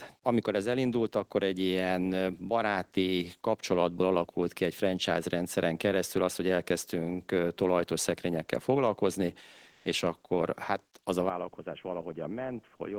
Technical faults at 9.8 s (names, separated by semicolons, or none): comfort noise in place of the background